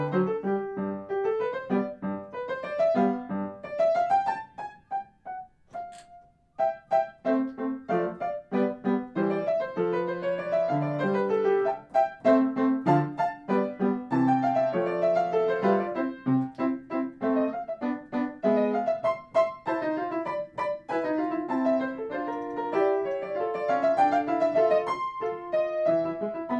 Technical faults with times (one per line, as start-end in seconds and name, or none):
none